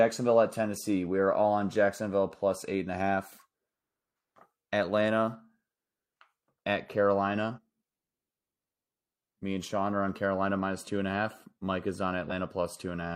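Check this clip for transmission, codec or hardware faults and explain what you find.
The clip has compressed frames skipped at 7.53 s and 12.26 s. Damaged or missing frames, consistent with 46.4 ms frames, drop roughly 100 ms and 50 ms of speech, so the audio jumps ahead at each point.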